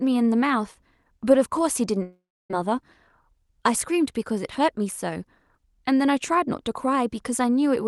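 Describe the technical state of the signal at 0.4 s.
At 0.4 s the speech is intact, with no dropout, glitch or distortion beyond the ordinary coding character of the call path it passed through.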